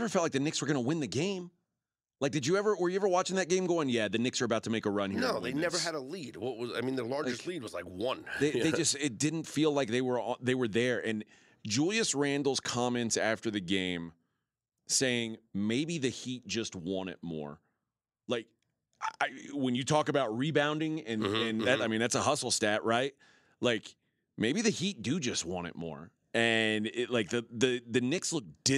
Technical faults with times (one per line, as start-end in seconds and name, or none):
none